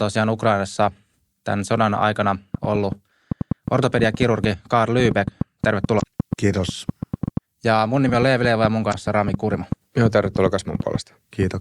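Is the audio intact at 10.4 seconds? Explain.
No. At 10.4 s the speech sits inside a train of clicks that runs from 2.55 s to 11.44 s. Sharp pulses arrive at an uneven pace, about 5.1 per second, and reach about 15 dB above the speech, so they tick and pop over talk and pauses alike. This is likely outside interference or a faulty connection. A waveform shows narrow, similar spikes, and a spectrogram shows thin vertical broadband lines at irregular gaps.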